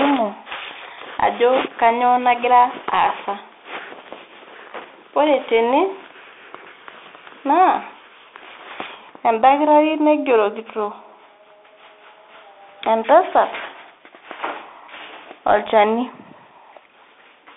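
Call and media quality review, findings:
Narrow, boxy speech throughout, nothing above about 3.8 kHz, lows thin below roughly 300 Hz. Scratchy s sounds, granular hiss under speech, roughness on loud bright passages. Probable component: Bluetooth CVSD headset codec, fits 64 kbps link. Mechanism: one-bit up/down delta coding, adaptive step lags fast high-frequency swings; narrowband headset profile cuts the top.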